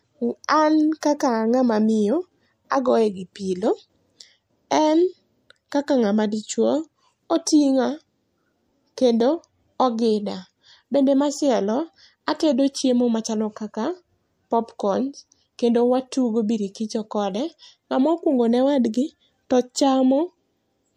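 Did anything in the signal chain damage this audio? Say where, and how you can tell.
Yes, at the codec stage. At 1.01 s, just before "kaka a ngama miyo", a brief smear of hiss leads into the attack, rising about 16 dB over the quiet moment for roughly 18 ms. This is pre-echo. The encoder spread quantisation noise across a block of about 36 ms, and the absence of any switch to shorter blocks let it leak ahead of the onset. Unlike reverb or echo, the noise comes before the sound, not after.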